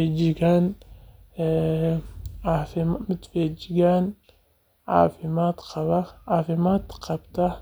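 No technical faults are audible anywhere in this speech recording.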